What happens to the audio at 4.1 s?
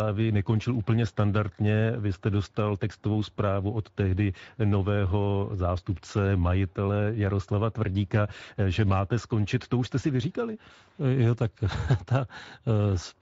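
At 4.1 s the speech carries Speex codec damage, present across the whole clip, which fits a setting near 16.8 kbps. The CELP coder has too few bits for the excitation, so speech sounds plainly noisy and hoarse; a spectrogram shows blurred harmonics with grainy noise between them.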